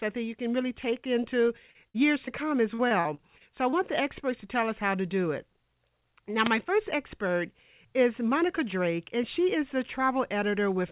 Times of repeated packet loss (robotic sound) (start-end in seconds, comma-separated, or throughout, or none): 1.48-2.32, 2.74-3.74